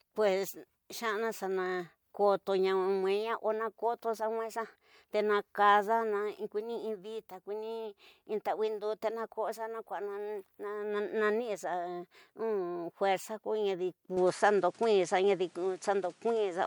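At 14.17 s the speech suddenly changes character and stays that way to the end: the top end disappears, with nothing above about 10.9 kHz, the level shifts by a few decibels, and a new background noise sits roughly 35 dB under the speech. There's no gap at the change. That pattern points to the input having likely switched to a poorer device partway through, so you're hearing a different device's narrower band and its own noise.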